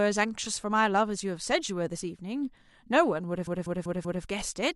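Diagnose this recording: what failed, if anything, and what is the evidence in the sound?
The failure sits in the coded bitstream, at the storage or transmission stage: repeated frames. From 3.47 s to 4.24 s the same 192 ms stretch of speech plays four extra times, producing a stutter. The block length fits a short run of compressed frames being written or delivered more than once, and the decoder simply plays each copy in turn. Because nothing is discarded, the recording gains 768 ms of duplicated audio.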